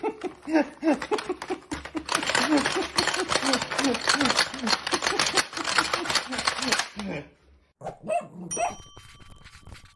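Nothing in the audio stood out as a technical problem on listening.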